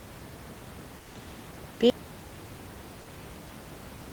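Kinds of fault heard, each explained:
Comfort noise in place of the background: at 0.99–1.15 s the background becomes steady and featureless, about 4 dB quieter, likely synthetic fill during discontinuous transmission.
Audio dropout to silence: from 1.9 s to the end the sound cuts to complete silence with no room tone, likely from a lost audio input.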